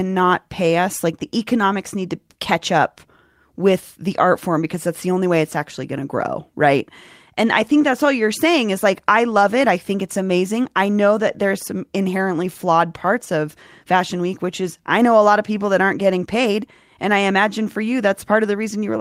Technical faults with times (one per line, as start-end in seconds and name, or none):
none